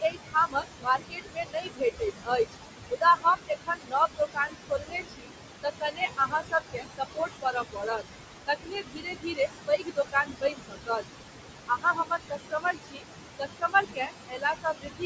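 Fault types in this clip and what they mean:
noise suppressor artifacts: The room noise dips between phrases and returns under speech, because the suppressor pulls steady-noise bands down by about 20 dB.
speech cut by the noise suppressor: Soft sounds and phrase edges sound swallowed or faint, dropping by up to about 22 dB, as the suppressor mistakes them for background noise.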